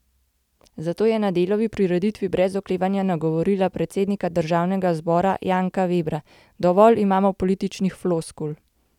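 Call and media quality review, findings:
No audible defects found in speech recording; no action.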